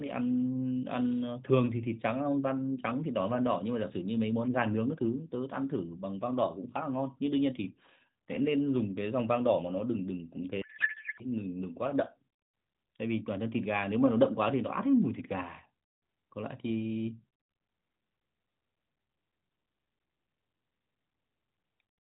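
At 10.62 s the speech suddenly turns into garbled noise and warble that barely tracks it, lasting until 11.25 s. That's a codec payload misread: the decoder is unpacking the AMR frames with the fields in the wrong places, which fits octet-aligned packets being read as bandwidth-efficient. Around it, the AMR narrowband mobile codec cuts everything above 4 kHz and adds only light coding colour, consistent with its 12.2 kbps mode.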